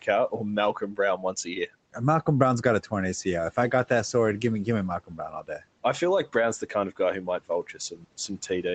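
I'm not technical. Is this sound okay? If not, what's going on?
No. This is speech cut by the noise suppressor: quiet parts of speech were treated as background and turned down at 0.73–0.99, 1.17–1.68, 5.04–5.63 (after "give me give me", before "I feel like"), and 7.26–8.05 seconds. They sound faint or swallowed, not silent or glitchy like a dropout.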